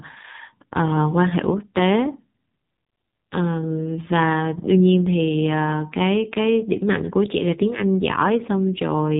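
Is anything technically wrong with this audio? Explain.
Yes. Throughout the speech, the voice sounds buzzy, thin and synthetic, with nothing above 4 kHz: heavy AMR narrowband mobile codec damage. AMR-NB rebuilds speech from a vocal-tract model fed by sparse pulses, and this much degradation points to a low mode around 5.9 kbps.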